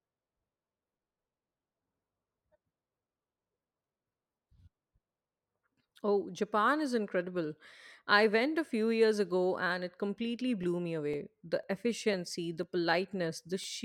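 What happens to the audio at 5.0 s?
Nothing goes wrong at 5.0 s; the speech runs through that moment intact, with no dropout, click, distortion or other fault to be heard.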